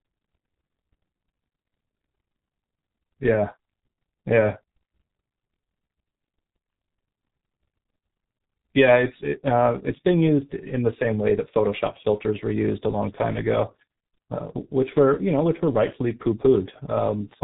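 Throughout, the speech carries heavy G.723.1 codec damage, with no content above 3.8 kHz, muffled and hoarse tone, and smeared consonants, consistent with roughly 6 kbit/s coding.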